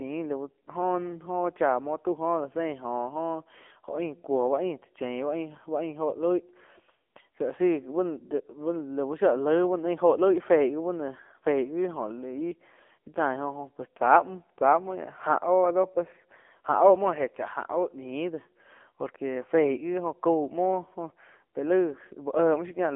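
A speech clip that sounds thin, boxy and buzzy from start to finish. The voice is confined to roughly 250 Hz to 3.4 kHz, with nothing above 3.5 kHz, and heavy synthetic graininess. That points to AMR narrowband mobile codec coding at a low rate, which fits the 6.7 kbps mode.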